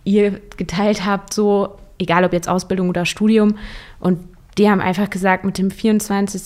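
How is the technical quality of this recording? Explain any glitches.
No technical faults can be heard in this recording.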